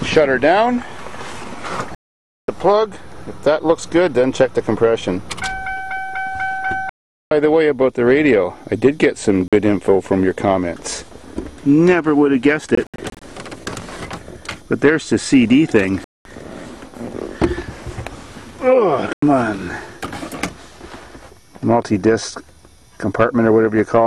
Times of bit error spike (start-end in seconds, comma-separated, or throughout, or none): none